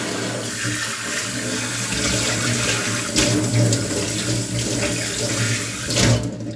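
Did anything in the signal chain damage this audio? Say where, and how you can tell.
No, nothing at any stage of the chain, from capture through playback, has left an audible mark on this recording.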